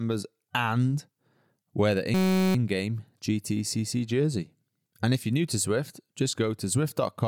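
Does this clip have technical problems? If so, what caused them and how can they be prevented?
Yes. From 2.14 to 2.55 s, just after "wear the", the speech gives way to a steady buzz at about 188 Hz. This is a system hang loop: the host or driver stalled while the audio hardware kept replaying the same ring buffer, here a 5.33 ms slice, which fits a 256-sample buffer. Repeating so short a piece many times produces a continuous tone at the loop rate, and almost no audio is lost once playback resumes. To prevent it, keep the audio thread at real-time priority with no blocking calls, and have the driver mute or fade out when buffer refills stop arriving.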